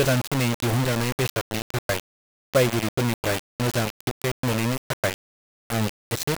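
From start to finish the speech sounds heavily grainy, with error nearly as loud as the voice, likely low bit depth without dither, roughly 3-bit rounding.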